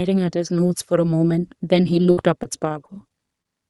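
From 2.11 to 3.47 s, repeated packet loss (robotic sound) hits the speech: short gaps up to 57 ms are patched by extending prior audio, giving choppy stretches with pieces missing.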